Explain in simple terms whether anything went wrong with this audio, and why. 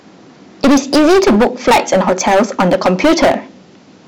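Hard clipping runs through the whole recording, from the first moment to the last. The speech was driven far louder than the recording chain could carry, so every peak hit a ceiling and was sliced flat. A large share of the waveform, roughly one part in seven, sits pressed against that limit. Those flattened tops add harsh overtones high in the spectrum, which is why every loud syllable comes out as a gritty, buzzing fuzz rather than clean sound.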